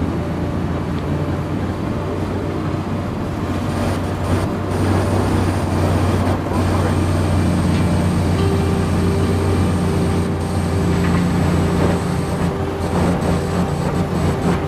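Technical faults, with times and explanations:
No technical fault can be heard in this clip; the signal stays steady and intact throughout.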